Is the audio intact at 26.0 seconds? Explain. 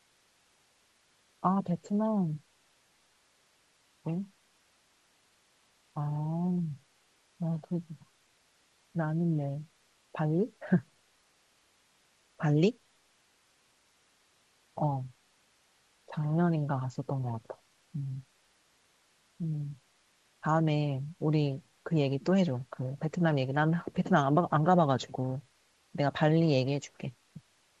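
Yes, the speech at 26.0 seconds is intact, carried cleanly over the G.722 wideband telephone path at 64 kbit/s.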